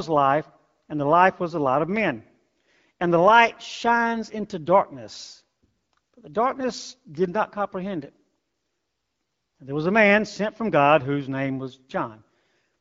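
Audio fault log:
Nothing stands out as a fault here; the speech comes through an AMR wideband (HD Voice) codec at 12.65 kbit/s, a rate where that codec holds speech clear and leaves only light coding traces.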